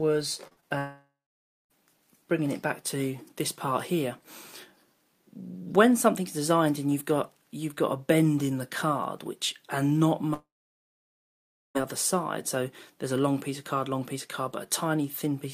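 Right at the start the audio smears and wobbles three times in quick succession, at 0.47 to 0.53 s, 0.53 to 0.59 s and 0.61 to 0.64 s, and any brief detail in that stretch can blur away. This is short concealed packet loss. Pieces of the stream arrived too late to be decoded, so the receiver stretched the preceding sound across gaps of about 33, 38 and 15 ms before blending back into the real signal.

From 0.78 to 1.72 s the sound trails into a fading buzz and then goes quiet for roughly 0.57 s before resuming. It comes back without whatever fell inside that span. The same thing happens again at 10.34 to 11.77 s, with a longer hush of about 1.29 s. Each is a long network dropout, likely from the stream stalling outright. The concealment could only extend the last sound briefly before leaving silence.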